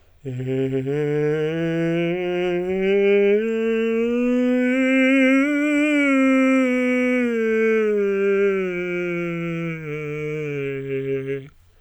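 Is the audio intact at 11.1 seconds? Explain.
Yes, the music plays through cleanly at 11.1 s, with no dropout, click or distortion at that point.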